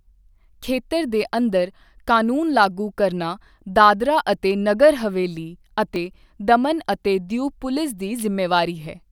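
Speech, with a repeated buffer at 5.95 s, between "ਦਾਦਰਾ ਅਤੇ ਨਗਰ ਹਵੇਲੀ" and "ਦਮਨ ਅਤੇ". A tiny 5 ms segment, consistent with a 5 ms buffer, plays twice more with hard joins when fresh audio arrives late. It sounds like a brief click or buzz and replaces roughly 10 ms of speech.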